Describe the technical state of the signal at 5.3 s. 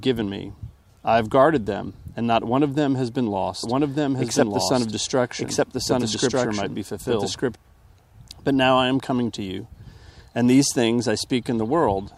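At 5.3 s a doubled audio track is present, running from 3.63 to 7.55 s: a full-band copy lags about a second behind at roughly equal level, with abrupt entry and exit, likely from a second, slower capture path.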